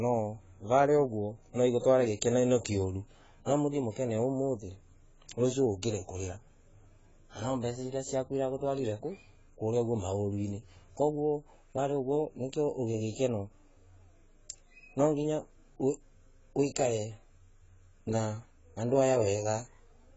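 From start to finish the speech is dull and smeared, nothing above 7.7 kHz, with fizzy sibilants, which likely points to AAC compression at a very low bitrate, around 16 kbps.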